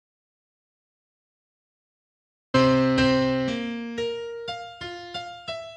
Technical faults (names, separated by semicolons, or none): audio dropout to silence